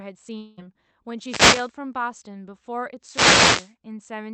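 From 0.37 to 0.59 s the sound smears into a buzzy continuation of itself that fades over about 0.2 s, never dropping to silence, and then resumes further on with that stretch gone. This is likely a long network dropout: packets stopped arriving, and the receiver's concealment filled the gap while the real audio was lost.

At 1.18 to 1.76 s and again at 3.02 to 3.74 s, a swish of static rises over the speech. Each is a wireless microphone noise hit, where reflections cancel the analogue FM radio signal and the receiver's noise climbs through the fade. The audio arrives through a WebRTC call path with Opus coding at 48 kbps, limited to about 8 kHz.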